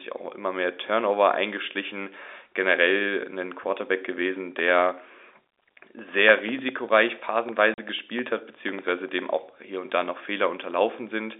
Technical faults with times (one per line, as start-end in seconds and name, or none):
7.74-7.78 packet loss filled with silence